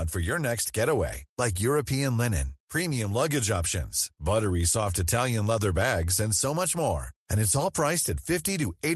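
Nothing's technically wrong with this speech clip: it just sounds like a normal trip through an Opus call connection, with the top end rolled off around 12 kHz as you'd expect.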